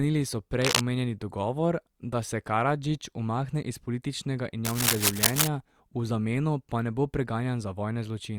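Dense, uneven scratching rides over the speech from 0.62 to 0.81 s, a little louder than the voice, before "omenjeni dogovor da se", and again from 4.65 to 5.48 s, about as loud, between "umakne iz političnega" and "v zameno pa ne". This cable scratch noise likely comes from a worn cable or connector being moved.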